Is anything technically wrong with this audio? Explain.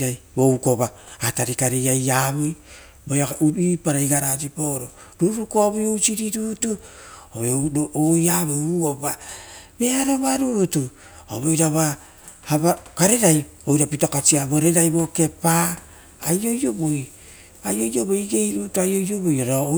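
No, nothing is technically wrong with this audio.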